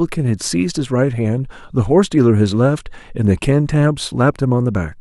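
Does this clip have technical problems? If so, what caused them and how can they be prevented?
No, nothing stood out as a technical problem on listening, so there is no cause to trace or prevent here.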